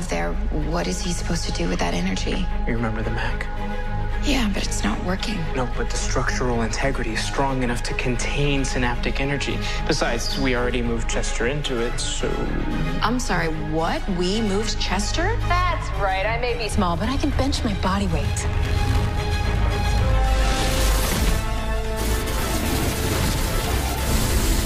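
Nothing technical stands out here, as the audio runs along without any problem worth flagging.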